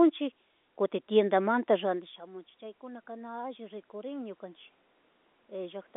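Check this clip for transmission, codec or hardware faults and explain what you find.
One fault is present. From 1.67 to 4.49 s, automatic gain rising: after the speech level falls by about 18 dB around 2 s, when the talker moves away, the AGC slowly adds about 7 dB, so voice and room noise swell together through the telephone-band audio.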